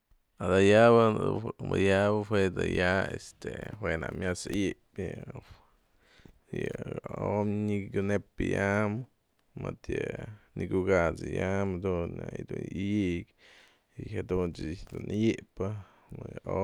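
Two sharp, isolated clicks cut through the speech at 2.43 s and 11.42 s. Each is likely caused by dropped samples: a couple of samples vanish from the stream, so the waveform jumps abruptly to a later value. The gap is far too brief to remove any sound.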